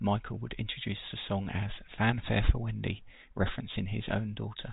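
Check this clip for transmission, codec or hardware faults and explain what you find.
No faults found.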